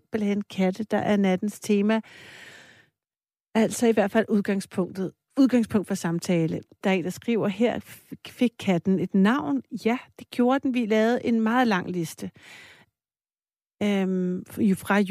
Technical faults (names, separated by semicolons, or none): none